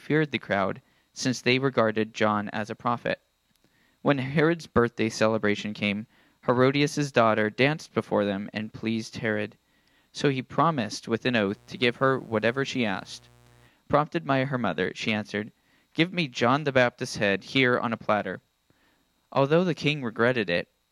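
From 11.45 s to 13.70 s, a mains buzz sits under the sound. It is tied to a 60 Hz supply. Something like a dimmer, a rectifier or a poorly shielded cable is letting sharp switching spikes into the signal path. Two spikes arrive in every mains cycle. They spread harmonics of 60 Hz well up into the kilohertz range. The result is a steady, raspy buzz rather than a smooth hum. It sits roughly 30 dB below the signal.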